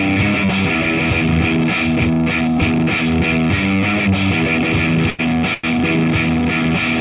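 Short stalls from late packets occur at 5.1 s and again at 5.54 s. Each time, the next packet arrives too late, the jitter buffer runs dry, and the receiver holds the last sound for about 86 ms and then 97 ms before resuming exactly where it left off. Nothing is lost, but the sound drags briefly with a faint buzz or dip. The band stops at 4 kHz, which fits G.711 A-law telephone coding.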